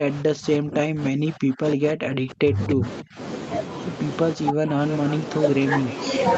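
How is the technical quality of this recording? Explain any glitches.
The recording has clear dropouts in three stretches: 0 to 2.86 s, 3.02 to 3.19 s and 4.35 to 4.79 s. The speech sinks by as much as roughly 40 dB, chopping in and out, with the first stretch hit hardest. The likely cause is speech suppressed in double talk, where the echo canceller couldn't separate the local talker from the far end's echo and turned everything down. Throughout the clip the top end stops around 8 kHz, which fits a wideband call codec.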